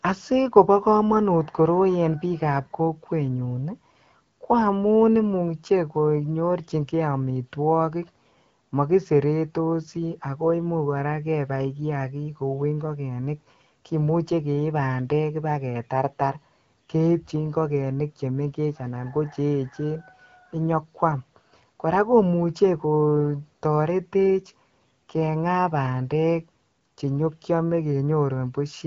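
No technical faults appear anywhere in the recording, with the speech carried over the AMR wideband (HD Voice) codec at 12.65 kbit/s, a rate at which that coding leaves only light traces and keeps the speech clear.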